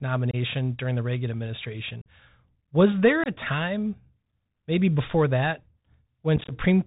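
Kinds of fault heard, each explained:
Bluetooth CVSD headset codec: one-bit slope-tracking narrowband coding removes everything above 4 kHz, leaving muffled speech with scratchy sibilants and granular hiss throughout.
Unconcealed Bluetooth headset packet loss: lost voice packets become silence, leaving abrupt holes at 0.31, 2.01 and 3.24 s and scattered chopping dropouts from 6.36 to 6.53 s.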